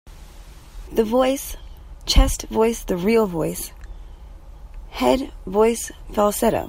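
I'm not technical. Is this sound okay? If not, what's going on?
Yes, this speech recording sounds fine, and nothing in it points to a technical problem.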